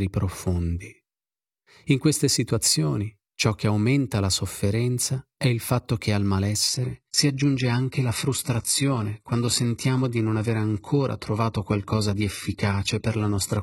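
From 6.68 s, after "il fatto che al", an adaptive stream at a lower bitrate cuts in gaplessly. Speech loses its treble and codec artefacts rise, and the spectrogram goes blank above 11.8 kHz.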